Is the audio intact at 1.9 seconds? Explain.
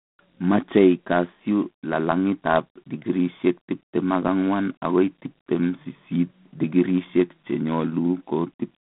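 No. At 1.9 seconds, as throughout the clip, G.726 ADPCM coding is present, with a harsh rasping hiss that fits 24 kbit/s. Too few bits per sample leave coarse prediction errors that rise with the speech level, and the telephone band confines the audio to 150 Hz to 3.6 kHz, with nothing above 3.9 kHz.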